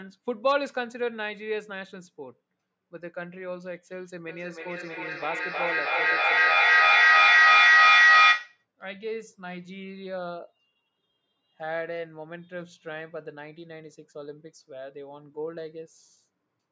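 Feedback howl runs from 4.29 to 8.66 s in this speech clip: a microphone-to-loudspeaker loop with gain above unity builds a tone around 2 kHz, peaking about 15 dB over the speech and pulsing roughly every third of a second, the loop's delay.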